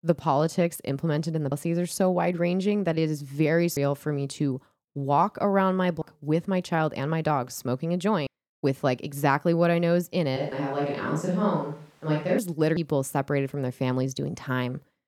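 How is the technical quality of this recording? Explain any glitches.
The recording has two kinds of fault: regular skips where audio is missing, and a two-second stretch picked up by a more distant microphone.

Audio missing between chunks occurs at 1.52, 3.77, 6.02, 8.27, 10.52 and 12.77 s, for example between "that it is very" and "for me to walk", and between "my dog smoking a" and "with like exactly what". The cause is likely a processor working in chunks of about 2.5 s and dropping roughly a third of a second at each handover. The two sides are butted together with no silence, so the speech jumps forward. On a waveform, each joint shows a sudden discontinuity. On a spectrogram, each shows a hard vertical seam where the harmonic patterns break off.

A switch to a distant microphone runs from 10.37 to 12.38 s. The close microphone's signal likely dropped out, leaving a pickup further away. 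The sound turns roomy and hollow, with thinner bass and a level about 5 dB lower. Room noise rises to about 35 dB below the speech. The change in and out is abrupt. A waveform shows a lower envelope with a raised floor between phrases. A spectrogram shows weakened low frequencies, reverberant smearing after each syllable, and a denser noise haze across the band.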